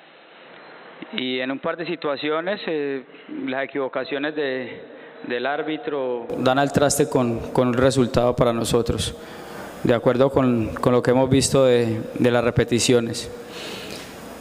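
From the start to 6.3 s the audio is band-limited, with nothing above 4.1 kHz, sits about 10 dB lower, and carries a noise floor roughly 35 dB down; at 6.3 s it clears abruptly without a gap, likely an input switched to a poorer device.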